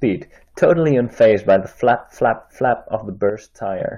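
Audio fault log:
3.30 to 3.80 s, one channel drops out: the speech suddenly sinks by about 6 dB for half a second, then jumps back up. Most likely one side of the stereo pair went silent, so the mono sum only carries half the shared signal.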